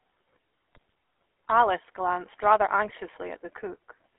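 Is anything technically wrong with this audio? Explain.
Yes, there are two problems. The whole clip has been through the GSM full-rate codec. The speech sits in a narrow telephone band, roughly 300 Hz to 3.4 kHz, which fits a 13 kbps GSM call. The codec rebuilds the voice from a vocal-tract filter fed with sparse pulse excitation, so it has that obvious buzzy, gravelly roughness.

On top of that there are GSM bit errors from 0.73 to 0.92 s and again from 2.86 to 2.91 s, right after "glanced rather". Corrupted filter, pitch or gain parameters reach the decoder, so the sound briefly squawks and gargles.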